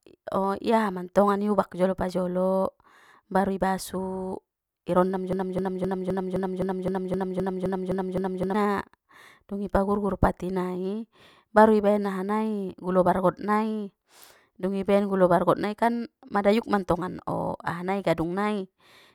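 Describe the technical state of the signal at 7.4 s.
At 7.4 s the speech is caught in a broken-record loop running from 5.33 to 8.54 s: a 0.26 s fragment repeats exactly, back to back, twelve times, likely from a stalled player or stream re-sending its last buffer. The spectrogram and waveform show identical tiles, and the speech that belonged there is lost.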